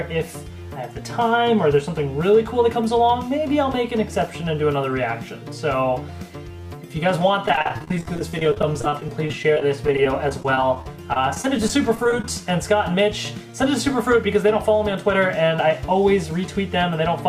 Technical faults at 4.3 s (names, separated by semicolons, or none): none